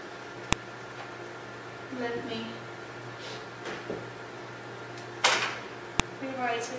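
Separate WAV pieces were joined with their headers left in, so the file header played as audio, giving sharp, loud clicks at 0.53 s and 6.00 s.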